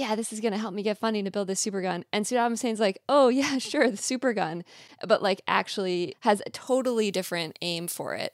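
From 6.67 s to the end at 8.33 s, the speech has pre-emphasis left on: the treble boost applied for transmission was never undone by the matching de-emphasis. The lift rises steadily above 1 kHz to about 14 dB at 10 kHz, a shape that fits the 75-microsecond FM curve. As a result the voice turns thin and brittle, with sibilants hissing sharply and the upper range sounding harsh and forward.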